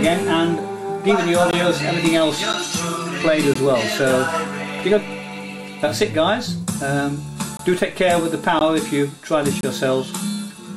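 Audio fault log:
1.51 to 9.63 s, gap between stream segments: short silent holes with hard edges at 1.51, 2.53, 3.54, 7.57 to 7.59, 8.59 and 9.61 to 9.63 s, each about 10 to 23 ms long. Their roughly one-second spacing matches a one-second segment length. The timestamps of neighbouring segments fail to meet, so the player fills the gap with silence. Nothing is dropped; each hole adds time and cuts the sound abruptly.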